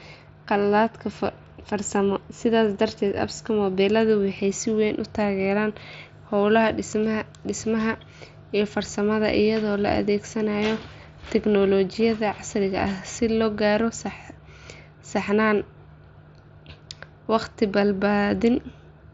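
No technical faults are audible anywhere in this speech.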